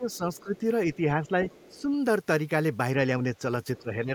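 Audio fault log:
0.0–0.64 s, 0.88–1.48 s, 1.7–1.91 s and 3.79–4.15 s, speech suppressed in double talk: the speech dips by about 5 to 15 dB in patches, deepest at the end. This is likely an echo canceller turning the near talker down along with loudspeaker echo while both sides spoke.
0.12–0.17 s, 0.34–0.58 s and 1.49–1.81 s, other side's voice leaking through: a faint second voice, about 30 dB below the speech, surfaces in short scraps. It is likely loudspeaker playback that the echo canceller left in the microphone signal.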